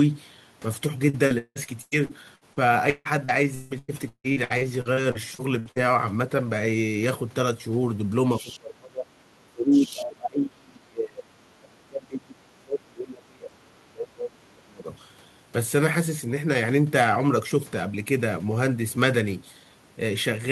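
Speech in which repeated packet loss (robotic sound) runs from 1.09 to 5.78 s: 22 gaps, the longest 174 ms, with about a third of the span filled by stretched repeats that show as smeared, striped blocks on a spectrogram. At 8.36 to 8.59 s and 9.72 to 10.01 s, a faint second voice about 20 dB down is likely the other side's voice leaking through past the echo canceller, visible as thin, separate harmonic traces. Speech suppressed in double talk follows at 8.40 to 9.16 s, 9.46 to 11.37 s and 11.54 to 14.89 s, likely the canceller ducking the talker during overlap. The waveform sinks by up to about 30 dB (about 25 dB in the last stretch).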